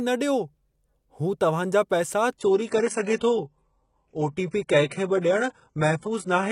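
Speech that, right after "जा पैसा" at 2.38 s, abruptly turns dull through to the end, with nothing above 11.1 kHz and no gap. This is an adaptive stream at a lower bitrate: a slowed connection forced a switch, consistent with a jump from roughly 96 kbit/s AAC to very low-rate HE-AAC.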